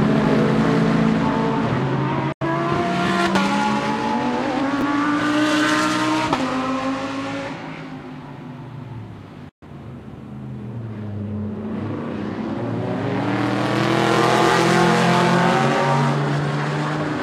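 At 2.32 s the audio cuts out in a digital broadcast dropout lasting until 2.45 s. The receiver muted after failing to decode good frames, fading out over about 3 ms. Roughly 85 ms of programme is lost, which fits two missing frames, and the sound resumes later in the programme.

Between 4.79 and 4.82 s the chunks play out of order: a 10 ms chunk arrived late and plays two chunks after its proper place. Nothing is lost, but the sequence is wrong, leaving three hard joins in a brief jumbled moment.

A second digital broadcast dropout runs from 9.49 to 9.67 s, again with a fade of about 3 ms into silence. Here about 128 ms is lost, consistent with three missing frames, before the audio returns.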